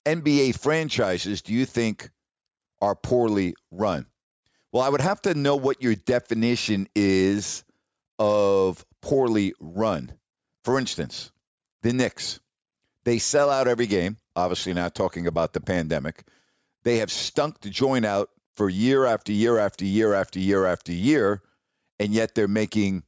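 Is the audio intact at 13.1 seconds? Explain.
Yes, at 13.1 seconds the speech plays through cleanly, with no dropout, click, distortion or other fault to be heard.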